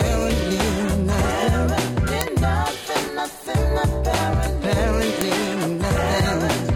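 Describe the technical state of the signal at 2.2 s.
At 2.21 s a file header is played as audio: header bytes left at the start of a joined piece are read as samples, giving a sharp, loud click. The waveform shows a brief spike, and the spectrogram a thin vertical broadband line.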